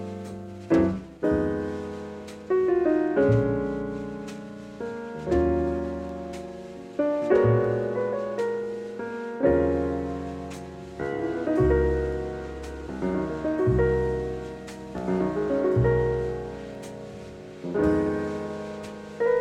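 No technical faults can be heard anywhere in the audio.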